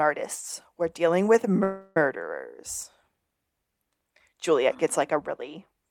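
From 1.63 to 1.97 s the last sound stretches into a fading buzz lasting about 0.33 s. The speech then resumes exactly where it stopped, with nothing lost, but runs 327 ms later. This is a call audio freeze, likely from delayed packets emptying the jitter buffer.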